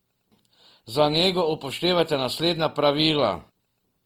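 From start to finish the speech turns rough and grainy, with noisy texture in place of fine detail. This is most likely Opus compression in its CELT mode at a low rate around 24 kbps. A spectrogram shows content reaching 20.2 kHz, with few holes but speckled, smeared upper bands.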